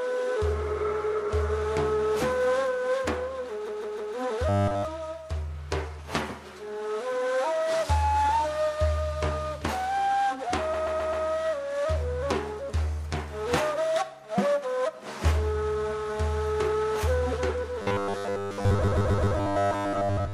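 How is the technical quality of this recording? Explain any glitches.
The recording has two kinds of playback fault, each recurring.

Repeated frames occur at 3.67 to 4.14 s, 10.73 to 11.25 s and 18.82 to 19.35 s. A block of compressed frames was delivered more than once, so the decoder replayed the same stretch: a 156.7 ms block three extra times in the first case, and a 130.6 ms block four extra times in the others. Each is heard as a stutter looping the same fragment, and together they lengthen the audio by about 1.5 s.

Robotic sound from repeated short buffers appears at 4.49 to 4.85 s and again from 17.82 s to the end of the clip. The likely cause is audio arriving too seldom, with the player refilling the gap by repeating a short buffer instead of fresh material. Here that imposes a rigid 100 Hz buzz, which fits a 10 ms buffer. The sound takes on a metallic tone that only loosely tracks the original. 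It is entirely buzz in the first stretch and mostly buzz in the final one, where it also overlaps the third stutter.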